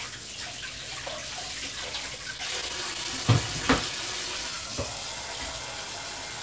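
From 2.18 to 3.27 s the audio shows repeated stalls (stutter). Packets reached the receiver late, or more slowly than they were played, and its jitter buffer kept running dry. Ten brief gaps occur across that stretch, none longer than 15 ms. Each was bridged by extending the last sound, about 105 ms in total, roughly a tenth of the span. Nothing is lost. The sound still catches and hitches in small, rapid jerks.

From 3.92 to 4.69 s comes a jitter buffer slow-down. The buffer was low, or had just raised its target delay. To rebuild a reserve, the receiver repeated single pitch periods, or slivers of quiet, many times over. This stretches the passage by 56 ms, so it plays at about 94% speed. Pitch stays the same. Sounds are drawn out slightly longer than they should be. The band stops at 8 kHz throughout, which fits a G.722 call codec.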